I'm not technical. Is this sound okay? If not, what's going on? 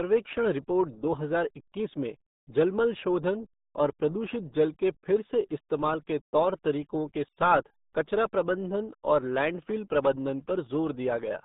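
No. From start to finish the speech carries the damage of the RealAudio 14.4 codec, an early dial-up format that squeezes sound very hard. Nothing above 3.8 kHz gets through, so everything comes out muffled and gargly, with a bubbling, watery edge.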